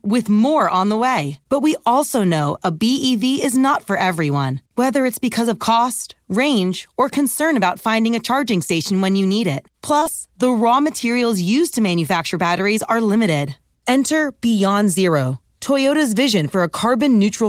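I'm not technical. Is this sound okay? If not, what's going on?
No. There is short concealed packet loss at 9.99–10.03 s and 10.03–10.07 s. Two bits of speech were lost, and the receiver patched them by extending the preceding sound, leaving a brief smear.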